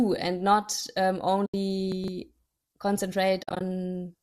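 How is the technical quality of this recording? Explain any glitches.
The recording has three glitches in two kinds, plus a light grain that is likely from low-delay AAC compression at about 64 kbps.

AAC frame loss with muting occurs twice. From 1.46 to 1.54 s, just after "and not um", the decoder lost frames and zeroed their spectrum. The overlapping windows fade the sound out and back in, leaving a soft 80 ms hole. From 3.43 to 3.61 s, losses totalling 120 ms are scattered across about 180 ms. The longest gap is roughly 50 ms, so the sound flickers in and out.

Chunks out of order appear at 1.92 to 2.08 s. A 40 ms chunk was delivered late and plays three chunks after its proper place. No audio is missing, but the sequence is shuffled and three abrupt joins form. You hear a brief jumbled stutter.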